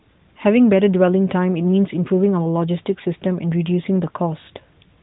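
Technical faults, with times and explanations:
No technical faults are heard, with no times or explanations to give.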